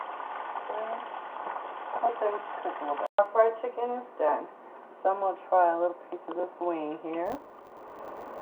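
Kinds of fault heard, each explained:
Filter restarted on every block: each 10 ms block starts from silence, making a 100 Hz buzz from 7.26 s that follows the signal's level, unlike steady clicks.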